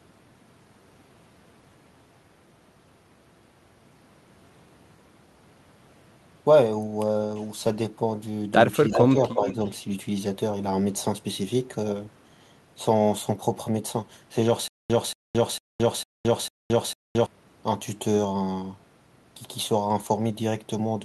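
A speech recording with faults in two places. From 8.88 to 9.47 s the voice suffers speech suppressed in double talk. It dips by about 5 dB in short pieces, about a third of a second in total. The likely cause is an echo canceller ducking both sides while they overlapped. An echo leak sits in the same stretch. A copy of the voice returns about 0.35 s late, at 8.92 to 9.09 s and again at 9.30 to 9.70 s. The first scrap is only about 5 dB below the speech. The second is faint, about 20 dB down. A loudspeaker's echo likely slipped past cancellation and was sent back. From 14.68 to 17.26 s comes a stutter with silent gaps. A 0.23 s burst plays five times. Each repeat is followed by 0.22 s of dead silence, a steady 0.45 s cycle. The stream likely stalled and replayed its last fragment at each retry, so the audio due in that span is lost.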